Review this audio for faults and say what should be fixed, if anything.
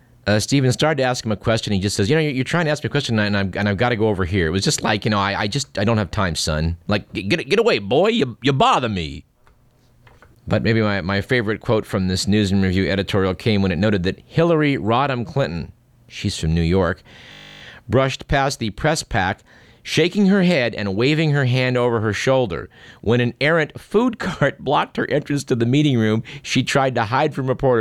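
From 17.32 to 17.62 s, just before "brushed past the press", the speech turns into a steady 50 Hz buzz. This is a system hang loop: the driver stalled while the hardware kept replaying one 20 ms slice of its ring buffer, fifteen times in a row. To prevent it, run the audio thread at high priority with a watchdog that mutes output whenever the buffer stops being refilled.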